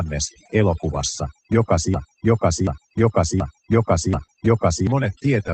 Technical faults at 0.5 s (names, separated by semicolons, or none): overdone noise removal